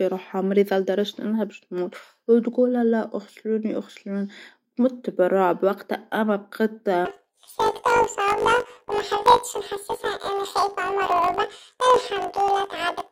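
From 7.05 s to the end, planar audio read as interleaved: each 20 ms block plays left then right at double speed, giving a 50 Hz robotic buzz while overall pace stays normal, unlike a plain speed-up.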